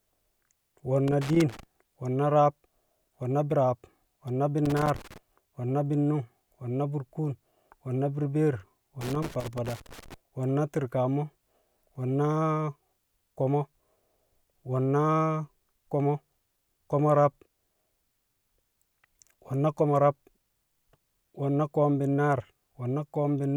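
A speech recording with three bursts of loose connector crackle, at 1.08 to 1.63 s, 4.65 to 5.18 s and 9.01 to 10.14 s, the last running just over a second. Each burst is an irregular scratching crackle. This is a worn or dirty contact being disturbed: the connection rapidly makes and breaks, chopping the signal, with pops where any DC on the line switches in and out.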